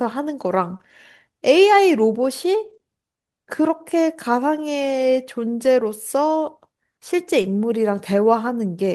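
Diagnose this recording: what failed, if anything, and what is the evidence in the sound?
Network loss recovered by the codec's redundancy accounts for the first kind of fault. It is a lost packet rebuilt from error correction, at 0.73 s, 2.65–2.75 s, 5.63–5.65 s and 7.43–7.45 s. There are no gaps in the speech. Instead, these stretches turn briefly rougher and noisier. The 60 ms event at 2.65 s fits three separate 20 ms packets. Each missing packet was replaced by the low-bitrate copy that Opus carried in the following packet.

Short concealed packet loss is also a network fault, handled at the decoder. It occurs at 0.77–0.81 s, 2.77–2.81 s and 7.41–7.45 s, each about 20 ms. These sound like a quick smear or wobble rather than a dropout. Nothing arrived in time, and no redundant copy was available. The decoder extended the preceding sound, pitched or noise-like, and then crossfaded back into real audio. 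The first two events follow shortly after an error-corrected one.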